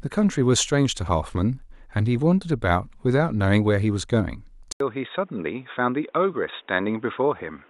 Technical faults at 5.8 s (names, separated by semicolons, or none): input switched to a poorer device